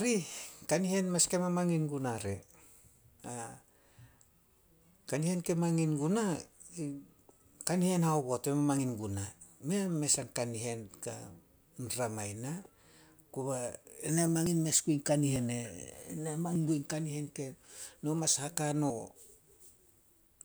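At 8.79, 14.46, 15.36, 16.56 and 18.90 s the speech jumps ahead with no gap, likely a dropped buffer (overrun) where samples were overwritten before being read. Most skips lose about 40 ms; the one at 16.56 s loses around 150 ms.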